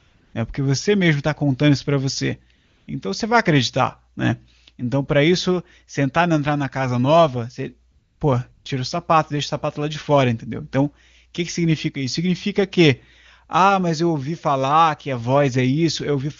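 Steady, smooth hiss briefly replaces the real background at 0 to 0.33 s, 2.55 to 2.87 s after "contando isso para você", 7.91 to 8.19 s after "na casa nova você", and 8.51 to 8.65 s before "o sapato deixa o". This is AMR comfort noise: the phone treated these pauses as silence and stopped sending speech frames, so the receiver filled the gaps with synthetic noise.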